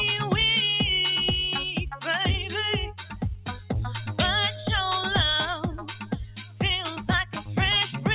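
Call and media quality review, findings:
Noise suppressor applied to music or sounds, whole clip. Speech-tuned suppressor treats sustained content and tails as noise. Level pumps, swinging around 10 dB. Attacks pass, held sound sinks.

Sound cut by the noise suppressor at 2.89–3.72 s, 5.61–6.6 s and 6.96–7.57 s. Sustained or decaying sound pulled down, deepest about 12, 13 and 13 dB.

G.711 mu-law call path audible as band limit at 4 kHz.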